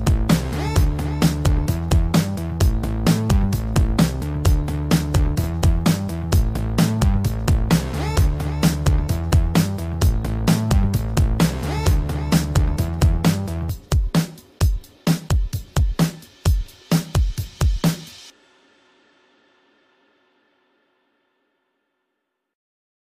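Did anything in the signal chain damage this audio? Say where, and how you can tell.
No, nothing stood out on listening that would point to damage at any stage of the signal chain.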